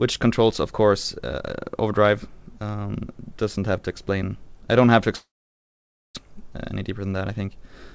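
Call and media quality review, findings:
Long network dropout, 5.16–6.19 s: likely packet loss upstream, no audio reaching receiver. Concealment extends last sound, decays to near-silence for most of the gap; about 0.6 s of audio never played, resumes further on.

Jitter buffer speed-up, 6.27–7.93 s: buffer overfilled after the stall, roughly 400 ms of added delay. Receiver trims pitch-period slices, roughly 150 ms total. Playback runs at 107% speed, same pitch, audibly hurried. Band-limited G.722 path, nothing above 8 kHz.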